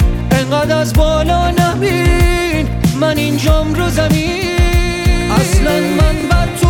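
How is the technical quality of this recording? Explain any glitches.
The recording has one glitch, a Bluetooth stutter near the end. At 6.21 to 6.24 s, what sounds like a single lost packet made the receiver replay roughly 21 ms of audio, a brief stuttering repeat before the sound jumps ahead.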